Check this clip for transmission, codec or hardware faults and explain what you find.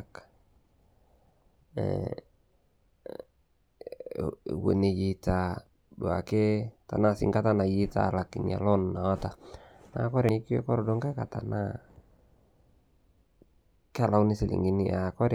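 Two dropouts where compressed frames were skipped, at 3.23 to 3.32 s and 10.20 to 10.38 s. Missing or rejected frames make the speech jump ahead about a tenth of a second.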